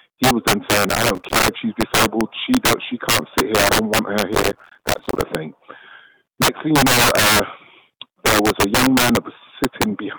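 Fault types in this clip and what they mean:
integer overflow: Throughout the clip, loud peaks driven about 10 dB past the integer limit wrap around to the opposite sign instead of being held, giving violent cracks far harsher than clipping. On the waveform, a small share of peaks jump abruptly from top to bottom; on a spectrogram, each shows as a bright full-height vertical line.
processor overload crackle: From 0.89 to 1.48 s and again from 4.33 to 5.22 s, the processor misses buffer deadlines repeatedly, each miss leaving a short silent gap of roughly 5 ms, heard as gritty tearing crackle. The waveform shows many hard-edged dropouts; the spectrogram shows dense broadband vertical streaks.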